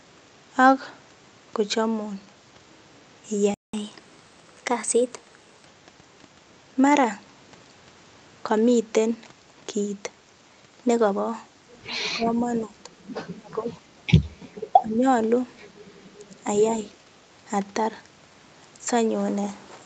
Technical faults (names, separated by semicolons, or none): playback stall; catch-up at higher speed; speech suppressed in double talk